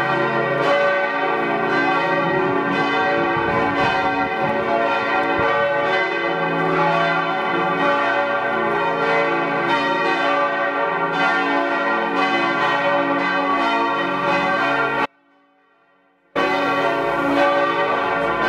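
At 15.06 s there's an audio dropout to a faint residue. The sound cuts off abruptly and stays gone until 16.35 s, about 1.3 s in all. During the gap you can still just hear a faint trace of the sound, roughly 40 dB below its normal level, so the line never goes fully dead. The likely cause is the wanted signal being lost upstream while the path after the break stayed live and carried only leakage.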